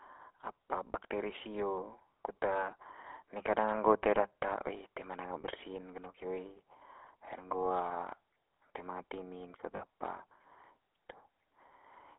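Speech comes through a narrow telephone band of roughly 300 Hz to 3.4 kHz with a plainly audible buzzy, gravelly grain. That is the GSM full-rate codec, consistent with its 13 kbps mode, which rebuilds the voice from a vocal-tract model excited by sparse regular pulses. Simple band-limiting would sound dull but clean, without this roughness. Lost GSM frames occur at 0.92–0.95 s, 5.42–5.45 s and 9.76–9.82 s, each fitting one lost 20 ms frame except the last, which fits two covering 40 ms. The decoder holds the last good frame, so the sound briefly smears into a rough metallic ring rather than dropping to the silence of an ordinary dropout.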